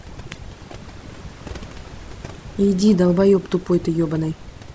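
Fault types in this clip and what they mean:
overdone noise removal: Noise reduction set far too strong kills bands near its noise estimate, leaving a lowered background that breaks up into twinkling specks throughout.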